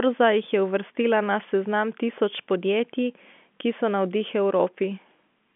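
No technical faults can be heard in the speech, which carries the narrow band of ordinary G.711 telephone coding, with the line passing roughly 200 Hz to 3.4 kHz and nothing above about 3.7 kHz.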